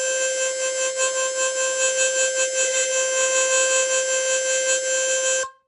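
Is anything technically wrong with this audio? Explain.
Yes. Throughout the music there is plainly audible codec damage that sounds like Nellymoser compression, which is likely the cause. The coder works on short fixed blocks with a tight bit budget, so quiet bands get no bits and are filled with noise, leaving a rough, hissy halo and a smeared, underwater quality. Nothing is present above 10.7 kHz, which fits a rate near 44 kbps. Unlike MP3 swirl, the graininess is a steady, noisy fuzz rather than warbling tones.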